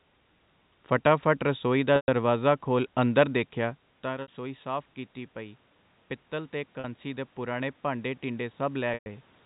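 Packet loss with pitch repetition hits at 1.96 s and 4.22 s. Packets went missing. The receiver filled each gap by repeating the last pitch period. The 120 ms gap fades toward silence, then cross-fades back. The 60 ms gap is a short buzzy hold.

Automatic gain rising runs from 6.29 s to 9.29 s. The input fell by about 12 dB. The gain control slowly raised its gain by about 4 dB. Sound and room noise swell together over three seconds.

The same loss returns at 6.80 s as a 40 ms buzz, and at 8.94 s as a 120 ms fade-out.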